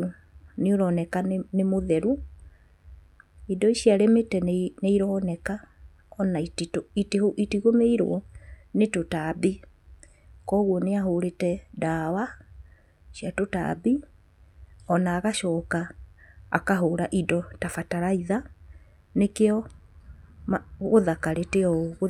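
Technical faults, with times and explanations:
Throughout, mains buzz: a steady, raspy buzz sits under the speech, well down, roughly 40 dB below it. It is locked to the 50 Hz supply. Sharp switching spikes, of the kind a dimmer, rectifier or poorly shielded cable lets into the signal path, arrive twice per mains cycle. That spiky waveform carries a dense stack of 50 Hz harmonics reaching into the kilohertz range, which is why it sounds gritty rather than like a pure low hum.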